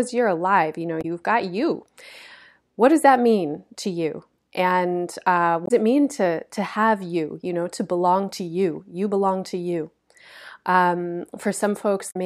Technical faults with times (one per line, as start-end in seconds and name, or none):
0.98-1.05 damaged data in a compressed stream
5.63-5.71 damaged data in a compressed stream
12.07-12.16 damaged data in a compressed stream